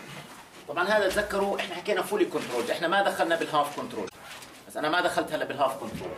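A brief glitch from damaged data in a compressed stream appears at 4.06–4.15 s: the decoder misreads corrupted frames, showing as an abrupt waveform discontinuity.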